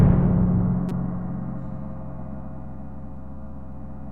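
At 0.89 to 0.92 s, damaged data in the compressed stream corrupts a short run of frames, so the decoder misreads them, loses sync and hunts for the next valid frame header. For roughly 26 ms this surfaces as a sharp, synthetic-sounding blip cutting across the sound.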